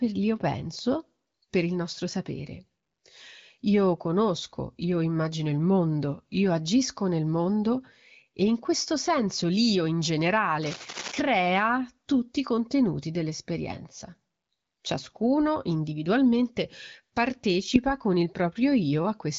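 A speech clip carries a burst of cable scratch noise from 10.62 to 11.21 s. It sounds like rough scratching about 10 dB below the speech, likely from a worn cable or connector being moved. The speech is band-limited to about 7.5 kHz, as expected from an AMR wideband (HD Voice) path.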